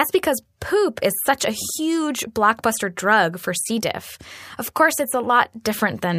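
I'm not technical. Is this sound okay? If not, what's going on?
Yes, no faults heard.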